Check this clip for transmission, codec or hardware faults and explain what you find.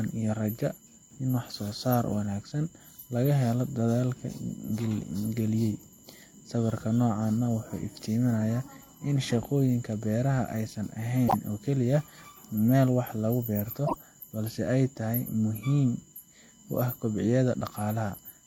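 Two faults are present in this speech: a constant USB whine and two brief repeated-frame stutters.

USB whine runs throughout: a steady 1 kHz tone, strongest at its 3 kHz harmonic, roughly 40 dB below the speech. It comes from USB frame-rate current leaking through power or ground. The fixed kilohertz pitch separates it from 50 or 60 Hz mains hum.

Repeated frames occur at 11.27 to 11.34 s, where a 52.2 ms block plays one extra time, and at 13.86 to 13.96 s, where a 26.1 ms block plays twice more. Each adds 52.2 ms to the audio. The stutter replays the sound instead of dropping it, which distinguishes it from a dropout.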